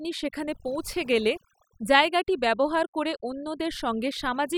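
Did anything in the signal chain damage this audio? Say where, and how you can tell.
Yes: overdone noise removal in the call processing stage runs throughout, gating bands near the noise estimate, leaving near-silent background with twinkling specks.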